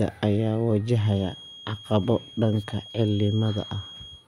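From 0.86 s to the end of the speech, a feedback whistle sits behind the sound: a thin, steady tone near 3.3 kHz, roughly 20 dB below the signal, swelling and fading slowly in level. The likely cause is a loudspeaker-to-microphone loop held just at the edge of feedback.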